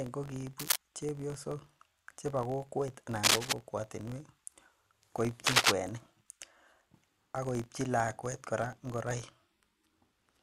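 A processing filter restarts on every block throughout, dropping its stored state and starting each block from silence. The small transient at each block start produces a steady buzz of about 46.9 Hz that rises and falls with the speech, which fits a 1024-sample block at 48 kHz.

A worn cable, connector or control being moved is the likely cause of cable scratch noise at 0.59–0.77 s, 3.23–3.53 s and 5.46–5.75 s. Rapid shifts in contact resistance add dense, ragged rustling bursts, roughly as loud as the speech in the first and somewhat louder in the later two.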